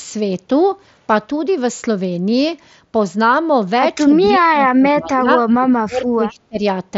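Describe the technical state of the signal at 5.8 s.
At 5.8 s the speech sits inside a stretch of speech suppressed in double talk, running from 5.57 to 6.64 s. The level dips and cuts out in pieces, falling by roughly 25 dB at its deepest. Around 0.7 s of that span is affected. This is likely an echo canceller that heard both sides at once. It could not tell the talker from loudspeaker echo, so it turned everything down. The band still stops near 7.7 kHz, as the headset link allows.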